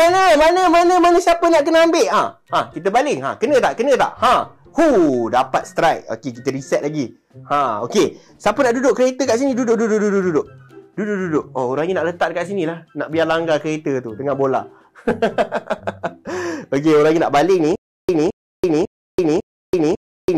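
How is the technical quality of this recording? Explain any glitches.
The recording breaks down at the very end with a stutter with silent gaps. From 17.76 s to the end, playback likely stalled and retried. A 217 ms fragment returns four times, each followed by about 332 ms of dead silence, repeating every 549 ms, while the audio that should have played there is lost.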